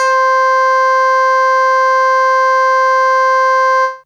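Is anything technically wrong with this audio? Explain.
No, nothing in this audio points to a technical problem: the signal stays continuous throughout, with no audible interruptions, distortion or timing irregularities.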